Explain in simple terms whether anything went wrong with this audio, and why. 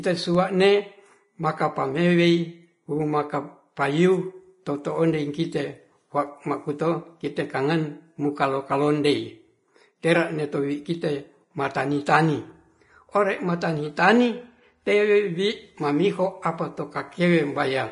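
The speech was likely squeezed hard by Vorbis compression, which saves space by discarding fine detail. Nothing remains above 10.6 kHz, so from start to finish the sound is dull on top, with a hissy, grainy texture and smeared consonants.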